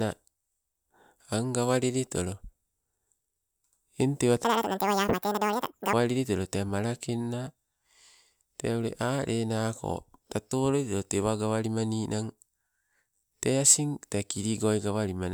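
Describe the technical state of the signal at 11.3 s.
At 11.3 s the speech plays through intact, with no audible fault at that moment.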